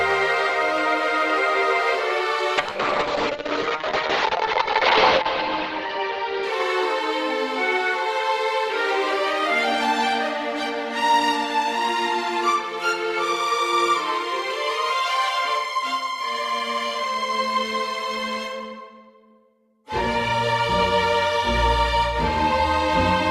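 At 2.59 s a call bitrate drop sets in and lasts until 6.99 s. The audio turns rough and muffled, consistent with the encoder falling from about 32 kbps to about 7 kbps. High frequencies vanish above 8 kHz. The worst stretch holds for 2.59 s.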